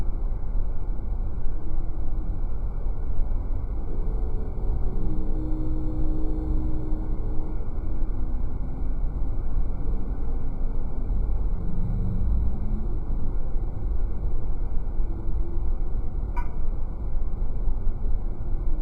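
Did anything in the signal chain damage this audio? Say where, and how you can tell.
Yes. The damage happens at sample-rate conversion, and it's crude rate conversion. Throughout the clip there's a faint gritty, inharmonic fizz riding on the louder and brighter parts, roughly 55 dB down. That fits a 44.1 kHz to 48 kHz change done by repeating nearest samples with no filtering.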